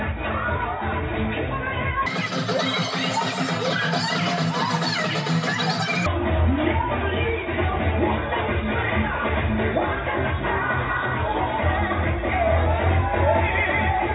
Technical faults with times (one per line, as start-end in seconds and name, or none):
2.06-6.06 wrong sample rate